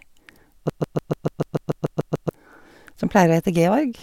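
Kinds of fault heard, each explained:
Broken-record loop: from about 0.70 to 2.29 s the speech snags on one 146 ms fragment and plays it back to back eleven times, most likely because the player or stream stalled and kept resending its last chunk, so the speech that belonged there is lost.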